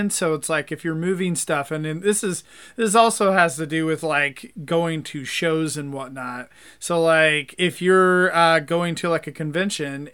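Nothing in this recording of speech stands out as a technical fault, so there's nothing to walk through here.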